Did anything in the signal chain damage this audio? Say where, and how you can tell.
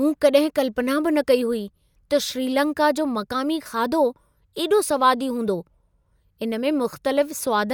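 No, nothing in the signal chain damaged this audio.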